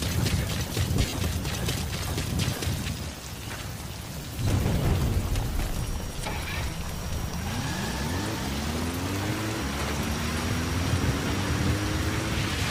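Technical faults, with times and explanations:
0.99–1.13 s, 4.22–4.24 s and 6.16–6.18 s, lost LE Audio frames: packets dropped on the Bluetooth link, about 100 ms missing in the first burst with gaps up to roughly 40 ms, and about 20 ms at each later point. The LC3 decoder concealed each gap by repeating the last spectrum with scrambled phase, so the sound briefly smears into noise.
5.65 s to the end, feedback whistle: the loudspeaker-to-microphone loop likely sat just below runaway gain, so a single 5.7 kHz tone keeps ringing without building up. It is heard as a thin, steady whistle about 25 dB below the sound, swelling and fading slowly in level.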